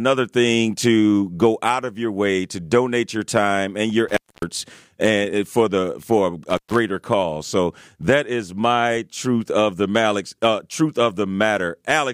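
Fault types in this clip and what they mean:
Intermittent contact: a loose plug or cable briefly losing its connection, so the speech drops out with a crackle as the contact breaks and remakes, and faint hiss in between. Here it happens twice: just after "your time and your" at 4.08 to 4.43 s, with the line open for about 256 ms, and again after "and for the for" at 6.50 to 6.79 s, open for about 130 ms.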